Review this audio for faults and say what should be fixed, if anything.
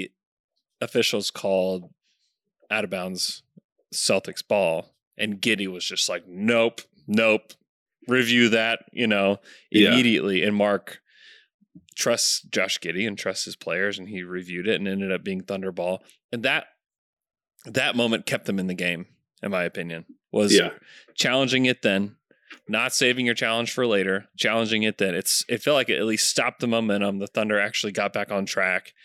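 No faults found; nothing needs fixing.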